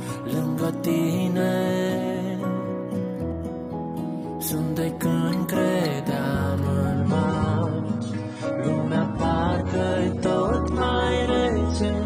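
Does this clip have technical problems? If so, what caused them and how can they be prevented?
Yes. From 6.95 s to the end, the adaptive stream drops to a lower bitrate: the treble vanishes above 9.7 kHz, consistent with a 96 to 24 kbit/s AAC drop. A steadier connection or a larger buffer would prevent it.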